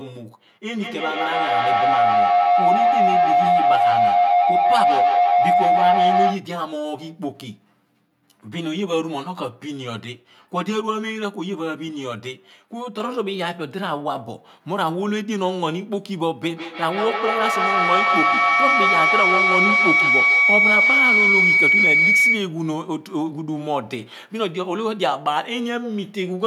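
Channel delay (comb filtering) runs from 0.0 to 13.0 s in this speech clip. One channel trails the other by roughly 10 ms, and when the two are folded to mono the shared content cancels at a ladder of evenly spaced frequencies, the first near 50 Hz and then about every 100 Hz above it. That fixed notch pattern gives the voice a hollow, phasey colour throughout that stretch.

Feedback howl appears twice, from 0.71 to 6.55 s and from 16.49 to 22.57 s. A second device in the same room is picking up the loudspeaker and sending it back, and each pass round that loop adds level, so the echo grows instead of dying away. The first howl settles around 700 Hz and the second near 2 kHz, each with a loop repeat of roughly 150 ms and peaking about 7 dB above the speech.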